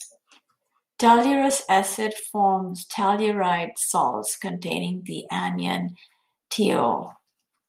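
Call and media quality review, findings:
Lost packet rebuilt from error correction, three single-packet losses at 3.55–3.57 s, 4.67–4.69 s and 6.55–6.57 s. Component: network path into the Opus decoder. Mechanism: each lost packet was replaced by the low-bitrate copy carried in the following packet, so the decoder played 20 ms of coarser audio instead of leaving a gap. Symptom: no dropout in the speech, but brief grainy, noisier patches at each point.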